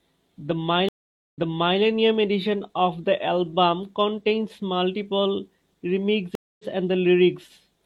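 A speech clip with two stream reconnects: the connection dropped and a new decoder restarted mid-stream. At 0.89–1.8 s, 0.45 s of silence is followed by audio resuming 0.46 s earlier, so sound repeats. At 6.35–6.65 s, 0.24 s of silence is followed by a jump about 0.15 s ahead, so sound is skipped.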